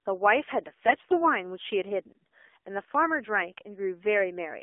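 The whole clip passes through the AMR narrowband mobile codec at 7.4 kbps in a 300 Hz to 3.5 kHz band, so the speech sounds muffled, buzzy and synthetic. From 0.86 to 1.24 s, AMR bit errors corrupt the less protected bits at around 5%, so the voice keeps its pitch but turns hoarse, scratchy and gargly.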